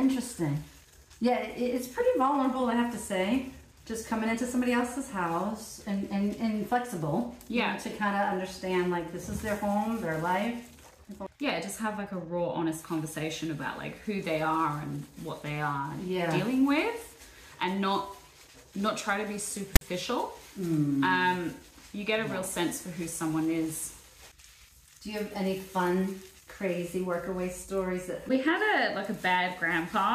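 At 19.76 s a harsh, loud rasp bursts in with hard edges, pushed off to one side, then drops to dead silence before 19.81 s. This is file tags played as audio: a text tag block, followed by its zero padding, was decoded as though it were samples.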